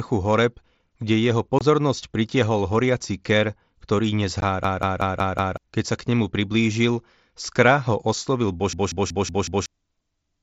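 At 1.59 to 1.61 s and again at 4.41 s the speech has brief holes with hard edges. This is unconcealed Bluetooth headset packet loss: a few milliseconds of headset audio never arrived and silence or an idle pattern was left in their place. The gaps are too short to be a hang, and nothing repeats. At 4.64 to 5.57 s and 8.73 to 9.66 s a system hang loop sets in. The sound hardware kept cycling one 186 ms slice, which fits an 8192-sample buffer. It plays five times at 5.38 Hz as a machine-gun stutter, and about a second of speech is lost each time. Behind these faults, the mSBC headset link adds its light grain.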